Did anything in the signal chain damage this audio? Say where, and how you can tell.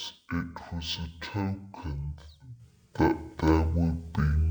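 Yes, at the sample-format conversion stage: this is stereo read as mono. From start to finish the speech runs at half speed and sits a full octave low, about 12 semitones down. The reader took interleaved left and right samples as one channel, so each stereo frame became two consecutive mono samples. That doubles the sample count, which halves playback speed and pitch together. This points to a channel-count mismatch in the file header or stream setup.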